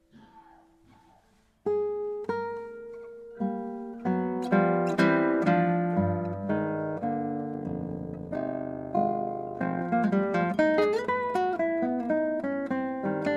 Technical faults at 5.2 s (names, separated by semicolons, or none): none